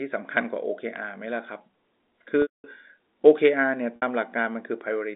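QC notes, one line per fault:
2.42–2.64 s and 3.96–4.02 s, packet loss with pitch repetition: Two gaps, 220 ms and 60 ms, are each bridged by repeating the last pitch period. The 60 ms loss sounds like a short buzzy hold. The 220 ms one fades to silence before the sound cross-fades back.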